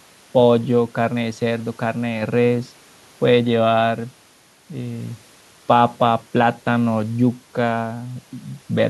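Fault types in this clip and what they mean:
Nothing stood out on listening to this speech recording.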